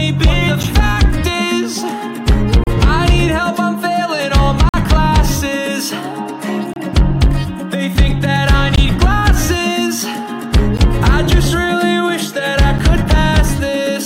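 Gaps between stream segments occur at 0.63 s, 2.64–2.67 s, 4.69–4.74 s, 6.73–6.76 s, 8.76–8.78 s, 10.77 s and 12.78 s, roughly every 2 s. Each is a hard-edged dropout to silence, lasting from about 10 ms to nearly 48 ms. The timestamps of consecutive 2-second segments fail to line up, so the player inserts silence to bridge each seam. The sound stops and restarts abruptly, but nothing is lost.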